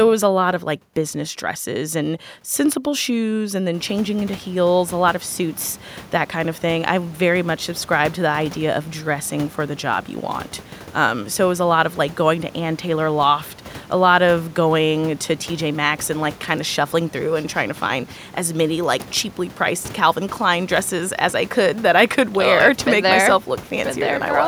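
No technical faults are audible.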